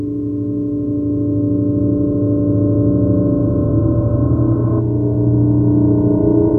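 No technical faults can be heard in this recording.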